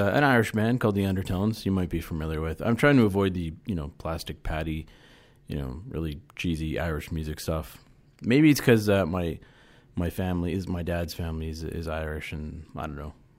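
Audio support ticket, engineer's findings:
No faults found in the speech recording. Nothing further to log against this ticket.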